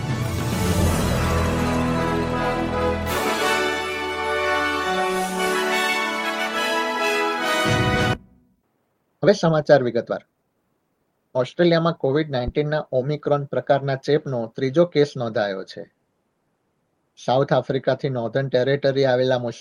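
A skip ahead at 8.13 s drops roughly one and a half seconds of audio, likely discarded by an overflowing jitter buffer, and the two sides join with no gap. A jitter buffer speed-up follows from 8.16 to 11.89 s. Short pitch-period pieces are removed repeatedly, running the audio at 121% speed at unchanged pitch and trimming about 0.7 s of backlog. A phantom power thump from 12.48 to 12.95 s is a deep low-frequency bump that decays over 107 ms, caused by a supply switching on or off on the live input and stepping through the coupling capacitors.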